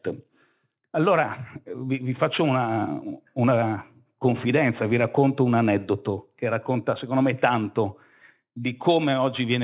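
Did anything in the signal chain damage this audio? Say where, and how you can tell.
Yes. Aliasing runs through the whole clip, introduced at a sample-rate conversion stage that dropped the rate without an anti-aliasing filter, which fits a drop from 44.1 kHz to 8 kHz. Speech energy above the 4 kHz fold point reflects back downward, so sibilants sound gritty and metallic, with the folded content sitting roughly 30 dB below the signal. On a spectrogram, energy runs hard up to the 4 kHz edge and shows mirror-image traces moving against the real harmonics.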